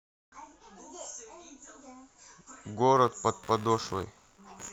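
From 2.97 s until the clip ends at 4.72 s, a buzzy, scratchy chatter sits beneath the speech, pulsing roughly 70 times a second and about 25 dB below it. This is computer activity noise: changing processor or graphics load disturbing the audio circuit's shared ground.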